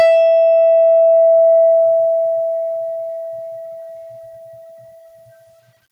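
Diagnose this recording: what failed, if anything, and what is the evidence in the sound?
Gain pumping throughout the music: the background swells between loud passages and ducks by about 15 dB under each hit, likely a fast limiter fighting excessive input gain at capture.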